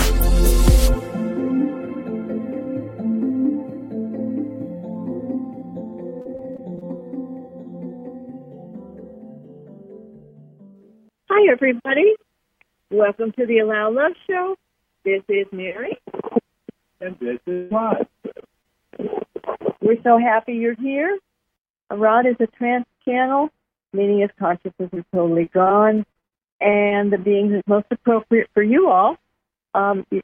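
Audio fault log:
6.21–6.89 s: repeated packet loss (robotic sound). Six gaps, the longest 35 ms, leave about 140 ms missing. Each is patched by extending the previous sound, so about a fifth of the stretch is synthetic and sounds choppy. On a spectrogram, smeared, flattened harmonic blocks interrupt the normal texture.
17.52–17.72 s: long network dropout. For about 0.2 s the sound turns into a sustained, fading continuation with no true silence. Lost audio was likely replaced by extending the last received sound. The waveform shows a smooth, repetitive envelope, and the spectrogram shows a frozen spectral band where detail should change.
18.40–18.44 s and 18.62–18.66 s: short concealed packet loss. About 20 ms of audio is missing at each point, and the gap is bridged by a brief continuation of the preceding sound. Each one is heard as a quick smear or wobble. On a spectrogram there is a narrow vertical sliver of blurred, static content.
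24.94–25.72 s and 26.12–26.93 s: repeated packet loss (robotic sound). Each run has six gaps. The first loses about 100 ms, longest 24 ms, and the second about 160 ms, longest 48 ms. The patching extends earlier sound, giving a stuttering texture. The spectrogram shows repeated short frozen patches, denser in the second run.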